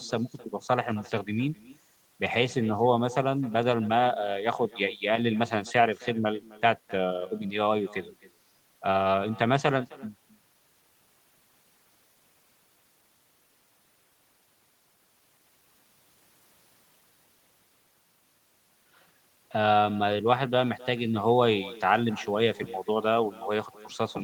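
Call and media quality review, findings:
Echo with no canceller, throughout the speech. Far end's loudspeaker feeds its mic, nothing cancels it, so every phrase returns roughly 300 ms later, about 21 dB down and thinner. Spectrogram: faint delayed copy trailing each syllable; waveform shows small repeated envelopes.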